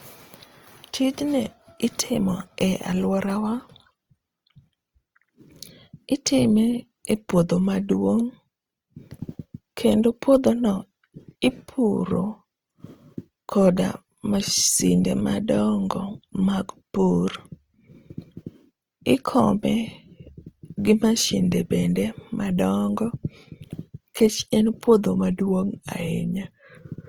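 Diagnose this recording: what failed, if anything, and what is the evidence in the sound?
Opus compression runs throughout, at the codec stage. The speech sounds grainy and rough, with noisy texture replacing clean harmonics, while content still reaches about 20.2 kHz. This fits fullband CELT coding likely starved near 24 kbps, filling bands with folded or noise energy.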